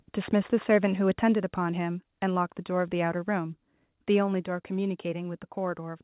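Right at the start, 0.22 to 0.28 s, the loudest syllables crunch with a harsh crackle. That's microphone overload, likely from the input gain being set too hot, so the peaks hit the converter's ceiling, about 9 dB over, and get flattened. It happens again, more mildly, at 0.72 to 0.85 s, only about 1 dB over.

Then the level drops in abrupt steps, with the background falling along with the speech, at 1.35 s (about 4 dB), 2.37 s (about 1 dB), 3.39 s (about 1 dB) and 4.41 s (about 3 dB). That's the microphone volume being stepped down, likely by the call software pulling the device gain back in response to those hot peaks.

Underneath it all the sound is narrowband, with nothing above 4 kHz, which fits a G.711 mu-law call path at 64 kbps.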